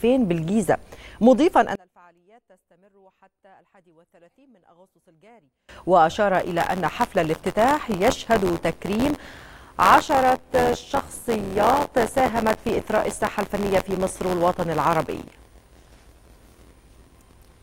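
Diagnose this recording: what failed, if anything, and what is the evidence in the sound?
Between 1.75 and 5.69 s the level collapses by about 33 dB, leaving only a faint residue. This points to wiring or playback stage, the likely cause being one channel inverted, so that when the stereo pair is summed to mono their shared content cancels.

From 6.34 s to the end, the driver or buffer stage shows buffer tearing: writer and reader have slipped and cross inside every period. Roughly a tenth of each buffer replays audio about 20 ms old, with hard joins, giving a steady 86.1 Hz robotic buzz that fits a 512-sample buffer.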